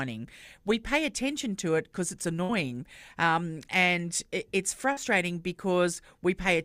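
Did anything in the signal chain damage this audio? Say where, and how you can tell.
Yes, at the network: a burst of packet loss at 2.43 to 2.51 s, where the last sound is stretched and faded for about 53 ms, then jumps ahead past 60 ms.

Also a short concealed packet loss at 4.93 to 4.99 s: 40 ms of late audio gets filled in by extrapolation, heard as a brief smear before blending back.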